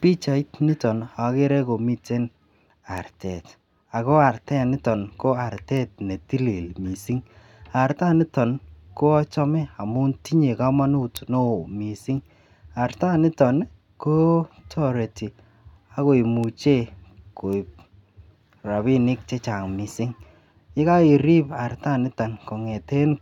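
Single flipped bits in stored or transmitted samples cause bit error spikes at 2.98, 5.77, 11.17, 16.44 and 17.53 s. Each is a sharp broadband tick near -18 dBFS, loudest around -6 dBFS at 11.17 s.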